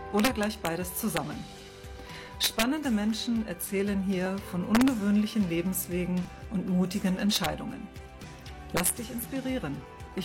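Integer overflow is the big one. Whenever the audio pushes past full scale, by about 1 to 4 dB, the samples wrap to the opposite sign instead of clipping, giving harsh cracks at 0.20–0.67 s, 1.17 s, 2.44–2.63 s, 4.75–4.88 s, 7.34–7.46 s and 8.77–8.90 s. You'll also hear tiny skips from overlap between stream segments at 4.26–4.30 s, 6.25–6.29 s and 8.24–8.27 s, about 2 s apart. The overlapping timestamps make the player drop about 36 to 41 ms of real audio each time, so the waveform jumps.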